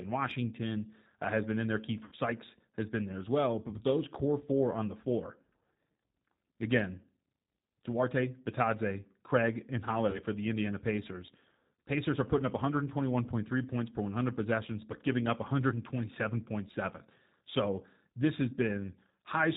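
Throughout, the speech sounds slightly rough and synthetic, with a dull, narrow top end where nothing above 4 kHz comes through. That is the G.729 codec, which fits an 8 kbit/s coder. Rather than keeping the waveform, it rebuilds each 10 ms frame from a vocal tract filter, a pitch predictor and a handful of pulses, so fine detail gives way to a buzzy approximation.

From 2.04 to 2.16 s the sound smears into a stretched, held sound that sags in level before the speech firms up again. This is VoIP packet loss concealed by the speech codec. About 70 ms of audio went missing within an 80 ms stretch, the longest gap 60 ms. The decoder filled the hole by repeating its last pitch and filter at falling gain, and because each frame builds on the previous one, the speech stays weak or distorted just after packets resume.

At 10.10 to 10.19 s a shorter version recurs, a brief smear where about 30 ms was lost and patched the same way.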